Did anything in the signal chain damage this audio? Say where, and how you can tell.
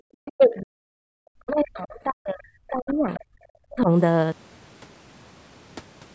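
Yes. The damage is at the call-processing stage, in the echo canceller. Speech suppressed in double talk shows up as sharp level collapses at 0.00 to 0.04 s, 0.35 to 0.94 s, 1.10 to 3.21 s and 3.68 to 3.90 s, with the deepest dips close to 40 dB down. The longest one runs about two seconds. This is likely the canceller failing to tell the near talker from loudspeaker echo while both sides spoke, then attenuating everything.

There is also the other side's voice leaking through: faint scraps of a second voice at 0.25 to 0.32 s, 2.89 to 2.94 s and 3.14 to 3.20 s, sitting roughly 20 to 25 dB under the main speech. Two of those bursts fall inside the long suppressed stretch. That is likely the canceller's echo estimate leaving residual loudspeaker pickup in the microphone signal, so brief fragments of the far end pass through instead of being subtracted.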